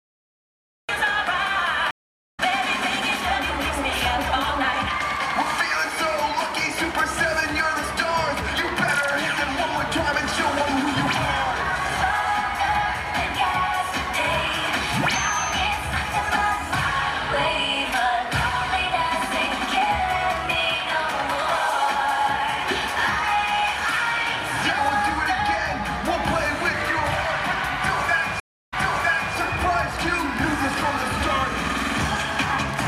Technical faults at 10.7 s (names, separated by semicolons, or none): none